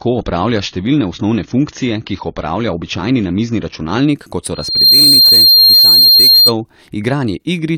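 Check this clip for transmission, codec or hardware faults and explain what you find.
Two faults stand out in this speech clip: a low-bitrate start on an adaptive stream, and a loudspeaker feedback squeal a bit later.

From 0.0 to 4.0 s you're hearing an adaptive stream starting at a low bitrate. The player grabbed a cheap version so playback could begin quickly, then switched up once it had gauged the connection. Nothing comes through above 7 kHz, and the codec artefacts are heavier, which fits something like AAC at 24 kbit/s. At 4.0 s the top end suddenly opens up, consistent with a jump to around 96 kbit/s, and there's no gap at the switch.

From 4.54 to 6.53 s there's a loudspeaker feedback squeal. A mic is picking up the speaker it feeds, and at 4.2 kHz the loop gain tops one, so that frequency keeps reinforcing itself. It swells over roughly a third of a second into a steady whistle sitting about 10 dB above the speech, then stops at 6.53 s.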